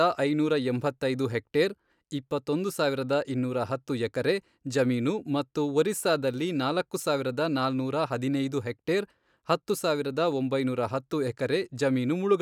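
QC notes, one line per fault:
No faults heard anywhere in the speech.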